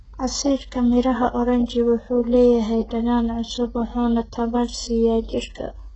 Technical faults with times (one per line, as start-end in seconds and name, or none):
0.00-5.96 HE-AAC compression